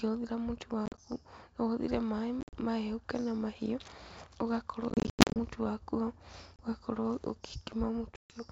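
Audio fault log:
0.86–0.99, 2.41–2.58, 4.90–5.43, 6.56–6.61 and 8.16–8.42 s: packet loss on an ADPCM call. Hard-edged silent gaps appear. Speech then returns slightly distorted until the decoder's predictor and step size resynchronise.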